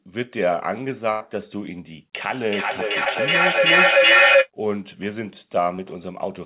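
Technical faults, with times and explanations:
1.12–1.22 s, burst of packet loss: roughly 80 ms of the call never arrived, and the receiver spent about 83 ms stretching the last sound before fading it down, so a held buzz or dying hiss replaces what was there, and the audio picks up again with that stretch missing. On a spectrogram the continued sound runs flat and unchanging, then dims, and ends abruptly where real speech resumes. The waveform shows the continued sound shrinking.
2.23–4.51 s, feedback echo between two devices: a second device in the same room plays the call back into the first device's microphone, and neither echo canceller can remove audio from the other device. Each phrase returns about every 0.4 s, sounding hollower and more ringing with each pass. Here the loop is strong, peaking about 10 dB above the direct speech, so the repeats stack into a swelling wash. A spectrogram shows copies of each phrase offset along the time axis, smearing into a dense, ringing band.
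3.04–3.08 s and 5.76–5.80 s, short concealed packet loss: each time about 20 ms of audio was lost. The decoder continued the preceding sound for 14 ms and 21 ms respectively before crossfading back, which leaves a brief smear or wobble, and a quick consonant may drop out. The first one falls inside the echo. On a spectrogram each appears as a thin vertical sliver of frozen or blurred energy, still capped at 4 kHz by the G.711 narrowband path. The waveform shows a tiny continued stretch with a slight kink where the real audio rejoins.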